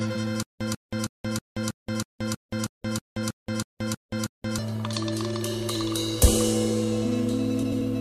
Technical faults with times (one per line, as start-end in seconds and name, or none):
0.43-4.58 stutter with silent gaps
7.62-7.82 frames out of order